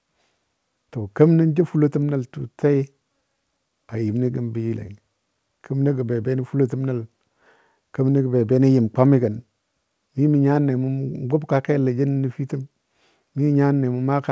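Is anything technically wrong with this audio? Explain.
No, nothing technically wrong can be heard here.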